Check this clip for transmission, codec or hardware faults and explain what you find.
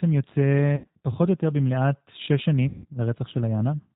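Two faults stand out: the whole clip carries the sound of a low-rate speech codec, and two short stretches break down where packets went missing.

Throughout, the speech is band-limited, slightly rough and synthetic, with nothing above 4 kHz. That is G.729 coding, which fits an 8 kbit/s stream: the voice is rebuilt from a vocal-tract filter, a pitch predictor and a few pulses per frame, so fine detail is lost.

From 0.76 to 0.87 s, and again from 2.68 to 2.86 s, the speech smears into a stretched, fading sound and stays weak just afterward. This is VoIP packet loss concealed by the speech codec. The decoder stretched its last pitch and filter across about 80 ms and 160 ms of missing audio, lowering the gain frame by frame, and took a moment to recover.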